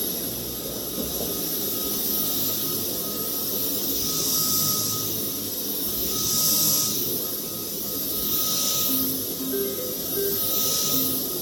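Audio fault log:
No faults heard anywhere in these everyday sounds.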